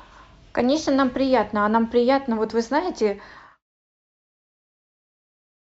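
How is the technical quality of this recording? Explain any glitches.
No technical faults can be heard in the speech recording; the only change in the signal is a deliberate, smooth fade-out that begins around 3 s and reaches silence at 3.65 s.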